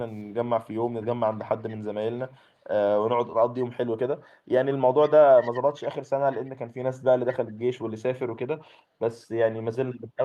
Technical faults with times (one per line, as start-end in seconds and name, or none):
0.65-1.75 echo leak
4.21-6.51 echo leak
7.26-7.92 echo leak